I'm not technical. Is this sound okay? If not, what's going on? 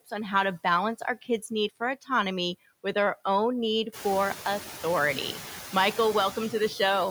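No. Noise suppressor artifacts run through the whole clip. A noise-reduction stage turns the background noise down in the pauses and lets it back under the speech. The room's own noise gets louder from about four seconds in.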